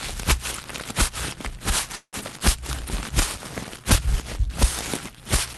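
From 1.95 to 2.16 s there is what sounds like a call audio freeze, likely caused by packets being held up until the jitter buffer ran dry. The receiver stretched the last sound into a fading buzz or hiss, ending in about 70 ms of silence, then resumed where it stopped, inserting about 0.17 s of delay while losing nothing.

From 2.21 to 2.24 s a skip ahead follows. Later audio was already waiting, so a stretch of roughly a tenth of a second was thrown away to catch up. Playback jumps forward with almost no gap, joining the two sides nearly directly. Through the call codec, the top end stops near 12 kHz.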